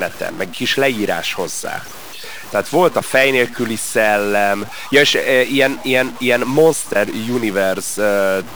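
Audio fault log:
throughout, stuck bit: harsh, buzzy distortion on the speech, with pauses filled by noise at about -30 dBFS, likely one converter bit held fixed.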